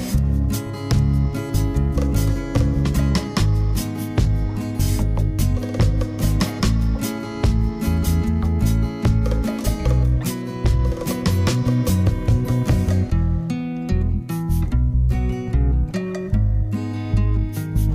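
Nothing stood out as a technical problem on listening to this audio.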